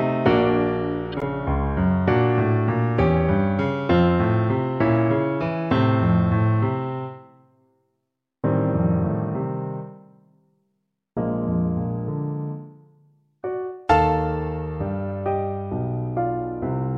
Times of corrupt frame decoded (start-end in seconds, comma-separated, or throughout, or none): 1.12-1.23